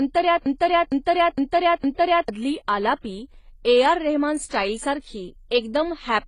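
From the very start to 2.28 s, a broken-record loop repeats one 0.46 s fragment four times back to back, likely a stalled stream resending its last piece. Unlike a stutter, the repeats are identical, and the missing audio never returns before "आलापी ए".

Throughout, smeared, warbly detail sits alongside hiss-like high-end artefacts, with nothing above about 10.4 kHz. These stacked textures, rather than one codec's signature, point to likely transcoding between lossy codecs, consistent with an AAC-LC to HE-AAC chain.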